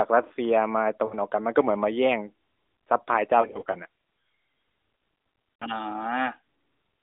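Lost AMR speech frames strike at 1.06 to 1.14 s, 3.42 to 3.79 s and 5.58 to 5.65 s. Corrupted frames were concealed by repeating earlier settings at falling gain. Brief dips and warbles result. The middle stretch stutters with scattered glitches.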